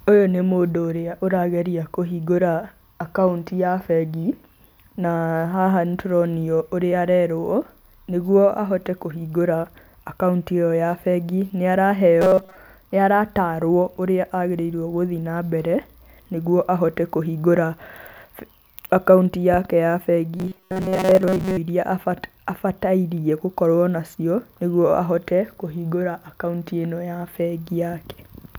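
At 12.22–12.57 s and 20.37–21.57 s, robotic sound from repeated short buffers appears: a metallic 188 Hz buzz, likely from looping about 5 ms, showing as rigid harmonic stripes.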